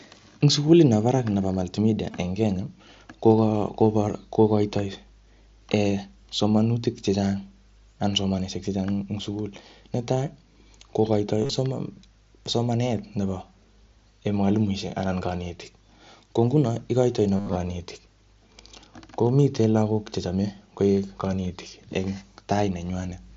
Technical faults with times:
2.11-2.14 concealed Bluetooth headset packet loss
11.42-11.50 concealed Bluetooth headset packet loss
17.36-17.56 concealed Bluetooth headset packet loss

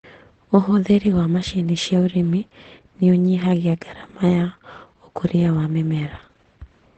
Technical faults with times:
0.00-6.98 Opus voice compression
4.50 dropped samples

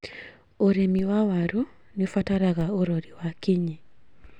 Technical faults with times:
0.99 DC step
2.61 DC step

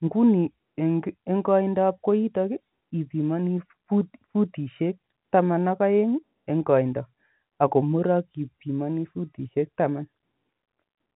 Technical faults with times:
none

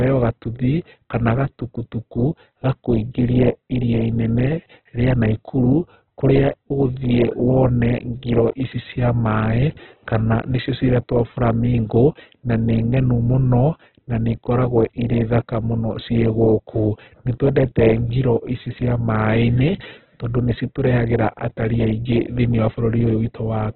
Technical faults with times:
0.00-23.75 Opus compression

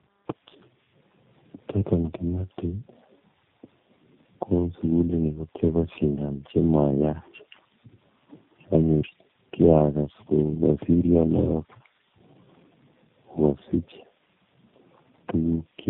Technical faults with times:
0.00-15.90 tandem speech coding

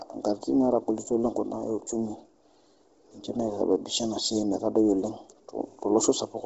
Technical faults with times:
0.00-6.45 Bluetooth LC3 compression

